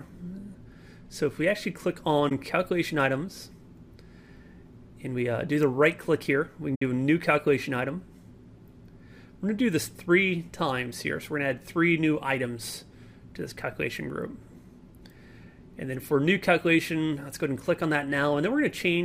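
AAC frame loss with muting at 2.29–2.32 s and 6.75–6.82 s: the decoder zeroed missing frames, leaving soft-edged dropouts of about 21 ms and 64 ms, faded out and in.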